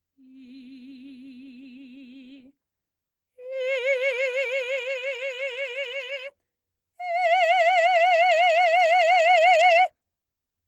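No faults can be heard anywhere in this music.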